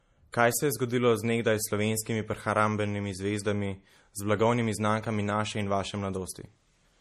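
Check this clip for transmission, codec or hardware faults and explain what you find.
Two codec faults are audible in this speech clip.

Throughout, MP3 compression artefacts: nothing above 14.4 kHz, and watery, swirling sibilants as weak frequency lines drop in and out. This points to a likely low bitrate near 40 kbps, unlike a plain low-pass filter, which would not swirl.

At 0.31 to 0.34 s, pre-echo: a short hiss leads an attack by 27 ms because quantisation noise spreads across the block. It comes before the onset, unlike a click or reverb tail.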